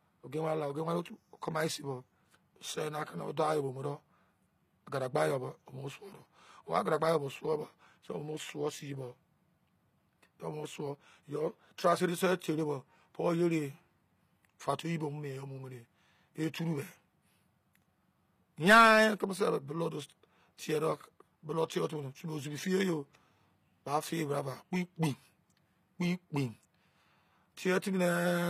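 Throughout the speech, the treble is synthetic: s sounds come out gritty and lispy, and nothing reaches above about 15.5 kHz. This is likely HE-AAC compression, with the upper band rebuilt from copied lower bands, which fits a low bitrate around 24 kbps. A spectrogram would show a hard ceiling and blocky, repeated-looking high-frequency texture.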